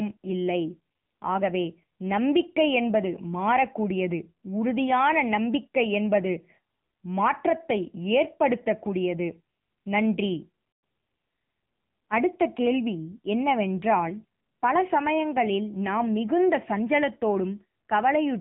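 Throughout, the speech carries AMR narrowband mobile codec damage: nothing passes above 3.8 kHz, and low-bit pulse coding leaves it plainly buzzy, which fits AMR-NB at 7.95 kbps.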